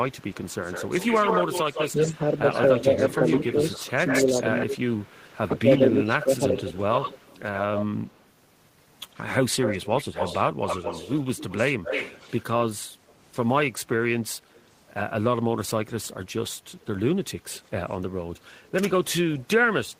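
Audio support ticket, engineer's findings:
Echo leak: delayed copy of the speech, 0.2–8.21 s at 146 ms and about 10 dB down; 9.61–12.43 s at 237 ms, about 10 dB down; faint scraps 13.09–13.13 s (about 35 dB down) and 17.52–17.94 s (about 30 dB down). Likely far-end loudspeaker echo canceller letting residual through. Discrete repeat at fixed delay, not a smooth reverb tail.

Speech suppressed in double talk: level dips during overlap at 3.57–4.79 s (deepest about 15 dB, roughly 0.3 s affected) and 5.56–6.67 s (about 10 dB, roughly 0.4 s). Likely echo canceller ducking both talkers. Partial dips, not clean silent gaps as with packet loss.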